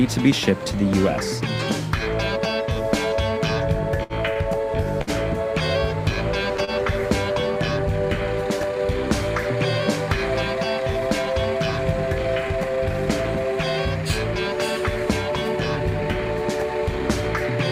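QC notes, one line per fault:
4.03–4.13 s, 4.34–4.39 s, 5.02–5.10 s, 6.64–6.70 s: short stall from a late packet, four times. Each time a packet arrived late and the jitter buffer ran dry. The receiver held the last bit of sound to bridge the gap, for 63, 18, 56 and 30 ms. Playback then resumed where it left off, so nothing is lost. Each stall sounds like a brief hold with a faint buzz or dip, and adds to the delay.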